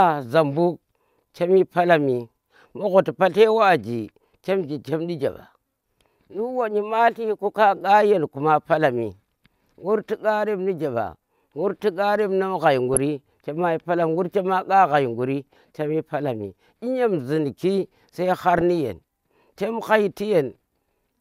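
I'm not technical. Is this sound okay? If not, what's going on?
No. The speech is interrupted twice by short burbling noises: once from 12.94 to 12.97 seconds, and again, nearly three times as long, from 18.52 to 18.61 seconds. This is DAB burbling, a digital radio fault. When reception is weak, a small fraction of the incoming data arrives damaged and slips past the radio's error correction, so short blips of noise appear in a few slices of the sound.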